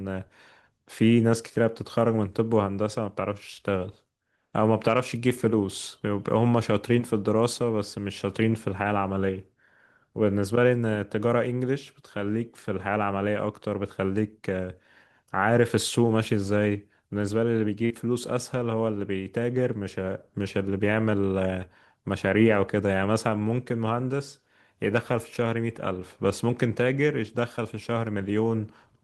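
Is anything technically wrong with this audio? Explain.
Yes. At 17.85 to 17.92 s there is a burst of packet loss. Consecutive packets were lost or arrived too late, so the receiver stretched the last sound for about 46 ms before resuming, with roughly 40 ms of speech skipped. It is heard as a brief held buzz or fading hiss. On a spectrogram the harmonics freeze into flat horizontal bands that dim before the real signal returns.

At 27.56 to 27.59 s there is a short concealed packet loss. The missing 20 ms was covered by about 15 ms of extrapolated sound blended back into the real audio, which gives a quick smear or wobble.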